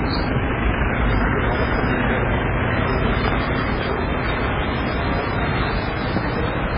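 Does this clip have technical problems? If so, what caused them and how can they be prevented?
Yes. Throughout, the sound has a watery, swirling quality and nothing above 5.2 kHz, pointing to heavy MP3 compression, likely at a very low bitrate around 16 kbps, where the encoder removes treble and drops weak frequency lines frame by frame. Encoding at a higher bitrate prevents this.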